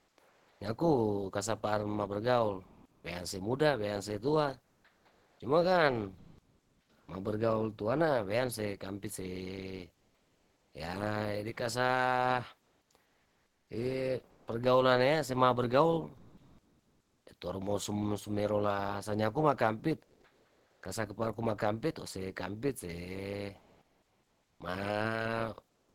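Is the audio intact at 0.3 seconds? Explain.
No. At 0.3 seconds the clip is inside a stretch of comfort noise in place of the background, running from 0.0 to 0.60 s. The likely cause is discontinuous transmission of the kind Opus DTX uses: the sender stopped sending audio during the pause, and the receiver filled the gap with synthetic noise. For roughly half a second, the real background is swapped for a flat, featureless hiss until the speech resumes at "nyaku kasapar mabergaul".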